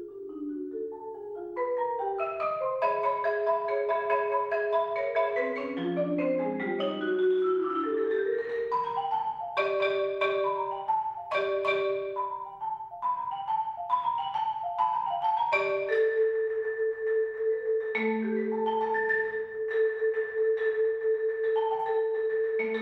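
No technical faults are audible anywhere in this audio.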